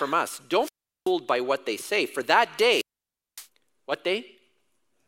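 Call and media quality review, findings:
Wireless microphone squelch dropout at 0.60–1.12 s, before "by what they say", and 2.68–3.48 s, after "they say for that". Hiss rises, then 0.38 s and 0.56 s mutes. Fading FM link triggers receiver squelch.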